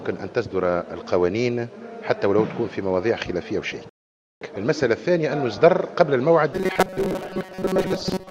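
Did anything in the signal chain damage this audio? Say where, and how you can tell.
Yes, two spots. First, a rebuffering stall at the playback/network stage: at 3.89 s the sound drops to dead silence and picks up again at 4.41 s exactly where it left off. Nothing's missing; the clip just gets about 0.52 s longer. That's the player draining its download buffer and sitting idle until more data arrives, then carrying on from the same point.

Second, from 6.53 s to the end there's robotic sound from repeated short buffers, with a rigid metallic buzz at 188 Hz laid over everything that still loosely tracks the underlying sound. That pitch means a chunk of roughly 5.3 ms is being looped, and most of the real audio in that stretch is being skipped. The likely culprit is the driver or buffer stage starving for data and replaying its last block to fill the gap.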